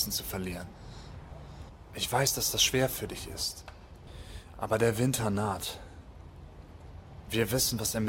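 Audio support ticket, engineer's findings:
No technical faults found on listening; signal level, continuity and frequency content hold steady throughout, with nothing pointing to a capture, transport or playback problem.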